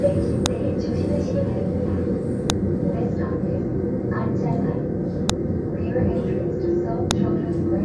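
Sharp clicks at 0.46, 2.50, 5.30 and 7.11 s are file headers played as audio. Each joined piece kept its header bytes, which play as a loud snap.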